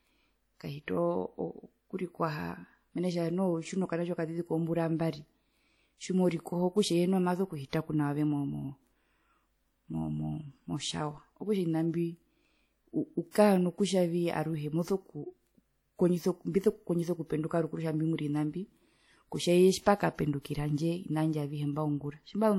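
Throughout the speech, a ringing, washy texture and hiss that swells with the signal point likely to WMA compression, plainly audible and consistent with roughly 48 kbps; unlike band-limiting, content still reaches 20.1 kHz. From 13.31 to 13.35 s, pre-echo puts a 44 ms hiss ahead of a sharp attack, softening it. The noise comes before the onset rather than after it, so it is not reverb.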